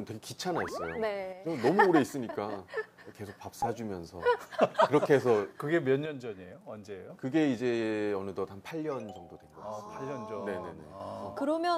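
At 1.33 s the level drops abruptly by about 6 dB and recovers at 1.47 s. The same drop returns from 6.06 to 7.10 s, then from 8.71 to 11.00 s. Each step is sudden, with no fade. The likely cause is one channel dropping out. When a stereo channel vanishes, the mono sum keeps only half of the shared material. Anything present only in that channel disappears during each gap.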